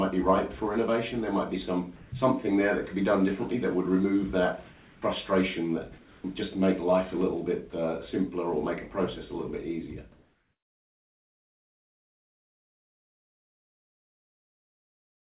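The audio is band-limited with nothing above 4 kHz, which fits a G.711 A-law call path at 64 kbps. Sound is dropped by the voice detector at 1.96–2.12 s, 4.72–5.02 s, 5.98–6.24 s and 7.70–7.72 s, where the sound gives way to steady noise, likely because the sender misjudged it as background. From 10.12 s to the end, the real background, sitting about 52 dB below the loudest sound, is replaced by comfort noise: featureless and about 5 dB different in level.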